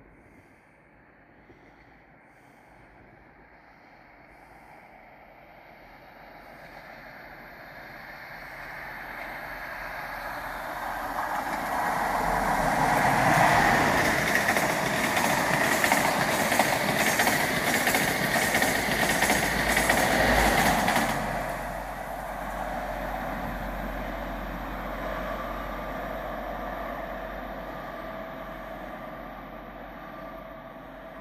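A second, later copy of the audio was likely mixed in throughout, producing a doubled audio track: a flat, full-band echo about 150 ms behind, roughly 5 dB quieter.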